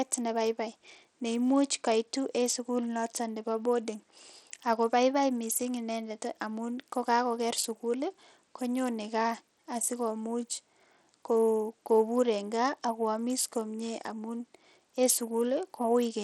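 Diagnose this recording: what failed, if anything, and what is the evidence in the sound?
The speech sounds dull and gritty across the whole recording. The top end thins out and flickers instead of holding steady, and a rough, grainy noise with aliasing rides on the sound from start to finish. This points to the codec stage, likely Bluetooth SBC compression at a small bit pool, with a rate that fits roughly 80 kbps. SBC splits the signal into a few wide sub-bands. At that rate the weak upper bands get few or no bits, and the rest are quantised coarsely.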